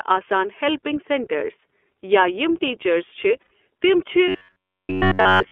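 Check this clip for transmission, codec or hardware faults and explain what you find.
Three faults are present: a codec limitation across the whole clip, one short dropout, and a mechanical buzz over the final stretch.

The iLBC codec is at work from start to finish. The speech sits in a telephone band of roughly 300 Hz to 3.4 kHz, with a slightly rough, synthetic edge that fits iLBC's 30 ms, 13.33 kbps mode. Each frame's excitation is coded independently. Unlike wideband codecs, nothing above 3.4 kHz survives, and the damage is graininess rather than swirling.

Lost iLBC frames occur at 3.42 s. About 90 ms goes missing, which fits three 30 ms frames. The decoder fills the gap by repeating the last pitch cycle blended with noise, so it sounds like a held, buzzy vowel. Because iLBC frames stand alone, the speech snaps back immediately afterward.

Robotic sound from repeated short buffers runs from 4.28 s to the end at 5.51 s. 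The speech becomes a rigid, metallic buzz at about 94 Hz that still roughly follows the speech. The likely cause is starved playback repeating a roughly 10.7 ms buffer throughout while the real audio is skipped. Unlike the brief frame-loss patch, it lasts over a second with a fixed pitch and never recovers.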